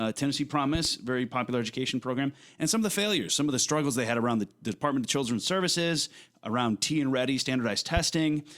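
A loud pop hits twice in quick succession at 0.75 to 0.88 s, then once at 7.97 to 8.00 s, about 10 dB above the speech, which continues underneath. It is likely a voltage pulse from a switch or plug, showing as tall waveform spikes and vertical broadband stripes.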